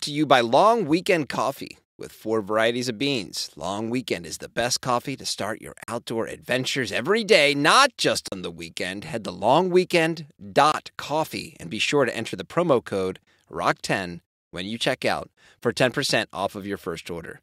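At 5.84, 8.28 and 10.72 s, blocks of digital silence (44, 40 and 20 ms) abruptly zero the signal, leaving short holes in the speech.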